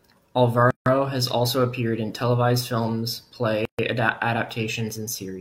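Speech, broken by gaps at joins of encoded pieces: silences of 155 ms at 0.71–0.86 s, before "has also appeared in", and 134 ms at 3.65–3.79 s, after "appeared in televised films", left by untrimmed encoder delay and end padding.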